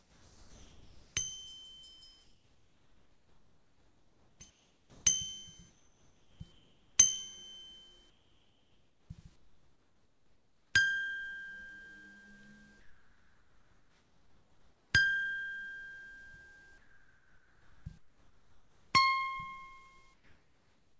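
A recording of everyday sounds carried over a call link. From 0.0 to 1.16 s there is sound dropped by the voice detector: about 0.67 s of real sound gives way to steady noise, most likely because the sender's detector mistook it for background and stopped sending until it triggered again. Unlike the later comfort-noise stretches, real sound is missing rather than the background simply being smoothed over. Comfort noise then replaces the background at 2.24–5.06, 5.70–6.98, 8.10–9.10, 9.36–10.74, 12.80–14.94, 16.78–18.94 and 20.14–20.99 s, likely from discontinuous transmission. The ambience turns flat and featureless, up to about 6 dB quieter.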